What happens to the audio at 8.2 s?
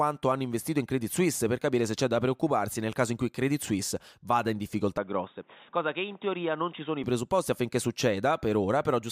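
Nothing goes wrong at 8.2 s; the audio is intact at that point, with no dropout, click, distortion or other fault to be heard.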